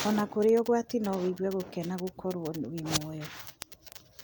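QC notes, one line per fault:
0.19–4.22 s: word clock ticks, a steady tick about every 0.15 s as one sample slips, which fits an unlocked receiver clock off by around 150 ppm.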